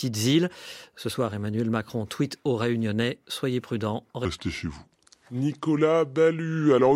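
A section at the wrong speed runs from 4.25 s to the end, right after "soyez prudents". The speech drops to about three-quarters speed, 0.752 times, and its pitch falls roughly five semitones, turning deep and dragging, likely from playback against a mismatched clock.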